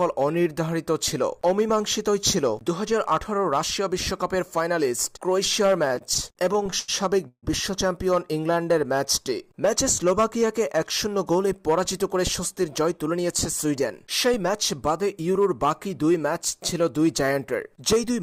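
From 5.85 to 6.9 s there's a run of repeated stalls, a proper stutter. Packets kept turning up late, so the jitter buffer ran dry thirteen times in about a second. Each time the receiver stretched the last bit of sound to cover the wait, about 248 ms in all, with the longest hold around 88 ms. That's roughly a quarter of the stretch spent on filler. Nothing actually goes missing, but the audio lurches and drags as it catches and restarts.

Right after, at 7.28 to 7.45 s, comes a short call audio freeze. The sound hangs as a smeared continuation of what came before and then drops to silence for about the last 70 ms, about 146 ms of hold in total. The likely cause is packets held up in transit leaving the buffer empty. When they arrive, the audio resumes where it stopped, so the whole thing sits about 146 ms later from there on.

Between 8.51 and 9.30 s there's a jitter buffer slow-down. 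The receiver was rebuilding its reserve by repeating single pitch periods and small slivers of pause, adding about 72 ms. The audio runs at about 92% speed, so things sound drawn out, but the pitch stays where it was.

Then the opposite happens twice, as jitter buffer speed-up. From 11.32 to 12.16 s the buffer was holding more than it wanted, so it trimmed tiny pitch-period chunks, roughly 70 ms' worth. That pushes playback to about 108% and it sounds noticeably hurried. A second, gentler pass from 12.61 to 14.48 s cuts about the same amount spread over a longer stretch. That runs at about 104%, again with the pitch unchanged.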